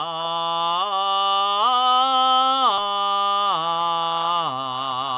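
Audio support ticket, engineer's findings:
Listened to the full music clip and nothing stood out; no findings to log.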